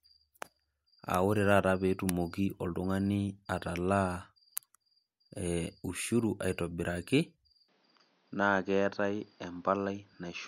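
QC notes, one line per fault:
7.68–10.47 s, input switched to a poorer device: from 7.68 s to the end the speech abruptly loses everything above 6.4 kHz, turning duller and boxier, drops about 5 dB in level, and gains a new noise floor roughly 35 dB down, with no gap at the change, likely a mid-recording switch to a narrower-band microphone or headset.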